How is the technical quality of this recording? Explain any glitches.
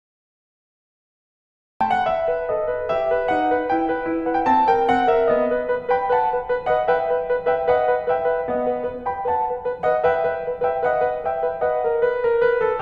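The recording has one glitch, a cut-off start. From 0 to 1.81 s there is only digital silence. The music then enters abruptly mid-sound because capture began late. Unlike a deliberate fade-in or soft attack, there is no gradual rise, and the music is already sounding when it appears.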